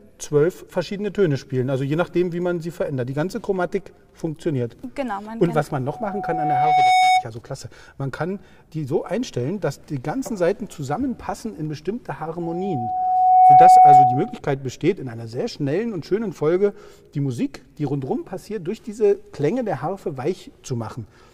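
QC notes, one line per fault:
5.87–7.25 s and 12.42–14.41 s, loudspeaker feedback squeal: a 740 Hz tone swells over about a second to roughly 10 dB, then 15 dB, above the sound as the mic-speaker loop exceeds unity gain. The spectrogram shows a brightening horizontal line, and the waveform shows a ballooning envelope.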